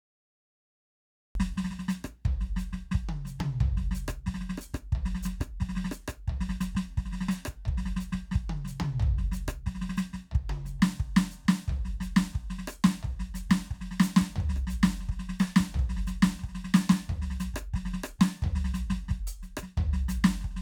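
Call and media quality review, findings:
Cut-off start, music: digital silence 0.00 to 1.35 s, then audio enters mid-sound with no attack or fade. Waveform shows a flat line jumping to full level; spectrogram shows an empty band edge-cut vertically at 1.35 s. Probable cause: recording or stream started late.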